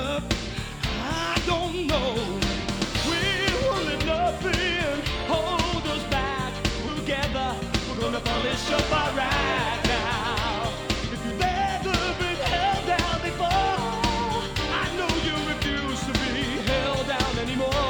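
At 6.87 to 6.89 s the audio suffers a skip ahead: about a second of material never reaches the output, and playback lands directly on later sound with no filler inserted. The stream was most plausibly discarded in transit or flushed by an overfull jitter buffer while newer audio was already queued. Unlike a dropout, there is no silent gap or concealment smear, just an abrupt splice where the sound's continuity breaks and the timeline lurches forward.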